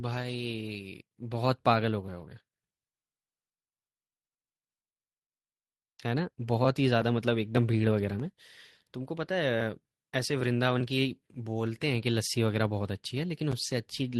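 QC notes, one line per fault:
6.97–7.03 s, lost packet rebuilt from error correction: a brief rough, noisy patch with no gap. It fits two lost packets replayed from low-bitrate copies in later packets.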